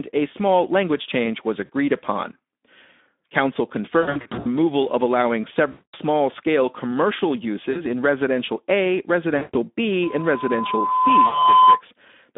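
Throughout, the speech sounds hoarse, grainy and boxed in, squeezed into a line band of about 200 Hz to 3.6 kHz. This is the Speex codec with too few bits for the excitation signal. The damage is plainly audible, and the sound fits a Speex setting near 11 kbps.

At 1.65 s, just after "small language change was", the sound briefly smears into a buzzy or noisy, fading sound. It happens again at 4.01 to 4.48 s, where 300 ms of loss is scattered across 440 ms. It returns at 5.71 to 5.94 s, between "of allowing" and "scale commercial", and at 7.71 s, after "scale commercial". Further smears follow at 9.37 to 9.56 s and 11.25 to 11.43 s. This is VoIP packet loss concealed by the speech codec. The decoder stretches its last pitch and filter while lowering the gain, so the voice stays weakened briefly after each gap.

From 10.02 to 11.81 s, a single tone at 1 kHz swells over about one and a half seconds. 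It peaks around 10 dB above the speech. This is a loudspeaker feedback squeal: the microphone hears its own loudspeaker, and the loop gain exceeds one at that frequency.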